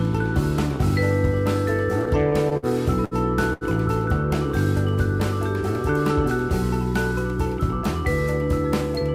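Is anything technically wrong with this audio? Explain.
Yes. The audio contains two kinds of network-timing fault.

From 2.05 to 2.66 s there are repeated stalls (stutter). Packets arrived late or more slowly than they were played out, so the jitter buffer ran empty four separate times. At each gap the receiver continued the last sound until data was available again. The filled time totals 93 ms, with the longest gap at 55 ms, covering about 15% of that stretch. Nothing is lost, but the sound drags and stutters across the span.

There are two short stalls from a late packet, from 3.05 to 3.14 s and from 3.53 to 3.64 s. In each case a packet missed its playout time and the jitter buffer emptied. The receiver stretched the last sound and then resumed from the same point, adding 66 ms and 77 ms respectively. Nothing is missing, but a sound is held too long, with a buzz or a dip where the stretch occurs.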